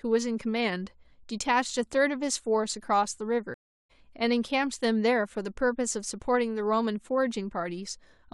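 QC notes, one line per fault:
3.54–3.91 s, stream reconnect: the connection dropped, leaving about 0.35 s of silence before a fresh decoder picked the stream up again mid-flow. The speech resumes roughly 0.3 s further on, so a short stretch is skipped, and the first frame or two fade in.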